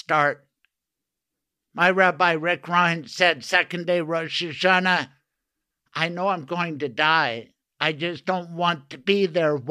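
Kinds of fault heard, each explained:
No technical fault can be heard anywhere in this recording. The speech comes through steadily from beginning to end, with nothing breaking into it.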